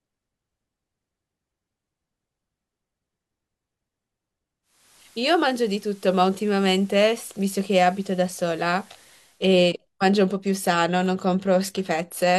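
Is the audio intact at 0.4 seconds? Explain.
Yes, at 0.4 seconds the speech plays through cleanly with no audible fault.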